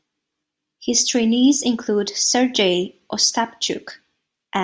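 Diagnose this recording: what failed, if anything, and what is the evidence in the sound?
Nothing in the recording stood out on listening, so there is no failure to diagnose.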